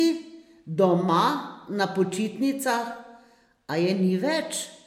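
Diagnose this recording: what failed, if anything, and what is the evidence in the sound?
The failure sits at the codec stage and runs throughout the speech: the file is low-bitrate audio saved at a high bitrate. The sound carries coarse lossy-coding traces that a high-rate file should not have. This likely comes from a Vorbis encode near 61 kbit/s later re-saved as MP3 around 192 kbit/s. On a spectrogram, the first encoder's thinned, smeared high-frequency detail remains intact. The second pass adds almost nothing and restores none of what was discarded.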